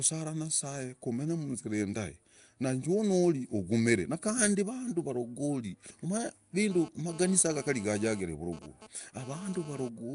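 Throughout, the speech has a rough, hissy halo and a smeared, underwater quality, likely Nellymoser compression at a rate that fits about 44 kbps. A spectrogram shows noise-filled bands and nothing above 10.6 kHz.

From 6.70 to 9.89 s, a GSM phone buzz cuts in and out, about 19 dB below the speech. It is a raspy 217 Hz rectified burst, visible as stacked harmonic lines.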